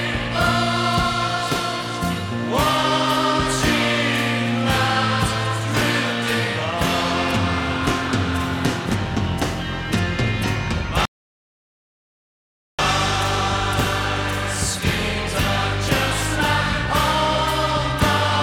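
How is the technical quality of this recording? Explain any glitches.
There's one real glitch here, a rebuffering stall running from about 11.05 s to 12.79 s. The player used up the audio it had downloaded and simply waited for more to arrive, so the sound drops to dead silence for roughly 1.7 seconds. When the data catches up, playback picks up exactly where it left off, so nothing's missing; you just get that awkward gap added into the timeline.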